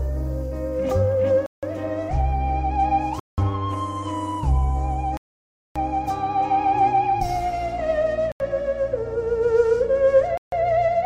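At 1.46 s (165 ms), 3.20 s (184 ms), 5.17 s (585 ms), 8.32 s (83 ms) and 10.38 s (148 ms), the sound cuts to silence: a Bluetooth stall, likely from interference emptying the headphones' buffer. Its irregular gap lengths set it apart from evenly spaced underruns.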